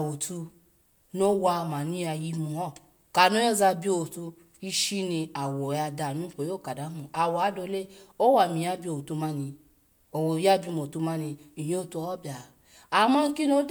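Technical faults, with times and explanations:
No technical faults are present in this speech recording, and the signal holds steady with no disruption to its level or continuity.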